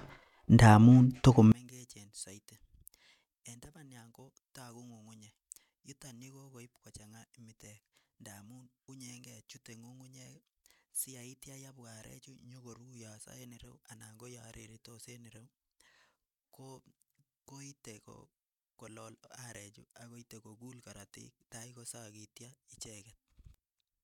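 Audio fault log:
1.52 s to the end, one channel inverted: from here the speech drops by about 30 dB when heard in mono, turning faint. The likely cause is reversed polarity on one stereo channel, so the centred sound common to both cancels and only their small difference remains.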